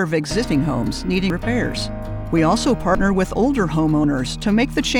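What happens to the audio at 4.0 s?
At 4.04 s the sound jumps forward with no gap of silence between the two sides. This is most likely a dropped buffer (overrun): the capture software fell behind, the hardware overwrote a block of samples before they were read, and the audio on either side was spliced directly together. Roughly 20 ms of material is missing, so the discontinuity is heard as a skip in the sound.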